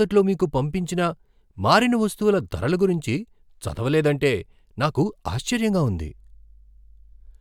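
A speech recording in which mains hum comes in at 5.66 s and continues to the end of the clip. It is a steady low tone at 50 Hz sitting roughly 30 dB below the speech. The cause is power-line energy coupling into the signal path, through a ground loop or from a nearby transformer, at the 50 Hz mains frequency.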